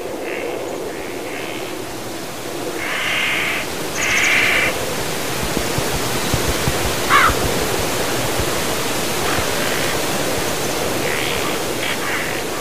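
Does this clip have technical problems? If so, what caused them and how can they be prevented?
No, this clip has no technical problems, so there is nothing to prevent.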